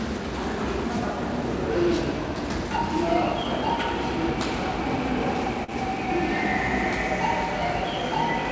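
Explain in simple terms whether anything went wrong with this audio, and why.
One thing went wrong, at about 5.64 to 5.70 s: a short concealed packet loss. Roughly 40 ms of audio never arrived in time to be played. The receiver covered the gap by carrying the preceding sound forward, then blended back into the real signal. What you hear is a brief smear or wobble there rather than silence. The call connection itself carries sound only up to 8 kHz, which takes some brightness off throughout.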